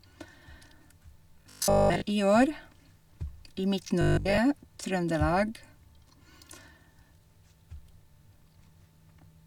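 Robotic sound from repeated short buffers in this speech, at 1.42–2.04 s and 4.01–4.39 s: a rigid 50 Hz buzz, likely from starved playback looping 20 ms chunks, replacing most audio.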